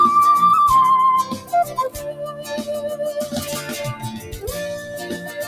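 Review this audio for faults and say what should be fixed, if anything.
A noise suppressor applied to music or sounds runs across the whole clip. It treats sustained tones and ambience as noise, so gain swings by around 15 dB, and held material pumps while attacks pass. Unlike a compressor, the level follows how steady the sound is, not how loud.

The sound is cut by the noise suppressor at 1.40–1.77 s (about 7 dB deepest), 1.94–2.51 s (about 9 dB), 4.80–4.96 s (about 5 dB) and 5.14–5.34 s (about 5 dB). Decays and sustained passages sink while transients survive, which tells this apart from dropouts, where everything vanishes at once.

To prevent this, bypass or disable the speech noise suppressor whenever the source is music or non-speech sound.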